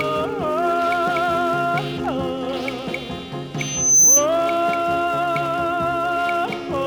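A loudspeaker feedback squeal cuts in from 3.58 to 4.26 s: a single 6.1 kHz tone swells over roughly 0.4 s to around 10 dB above the rest of the audio. A mic was catching its own speaker, and the loop ran away at that frequency.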